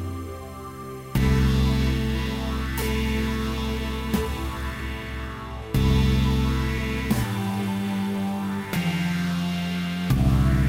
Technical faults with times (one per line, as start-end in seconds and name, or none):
0.84 overlap between stream segments
2.82 overlap between stream segments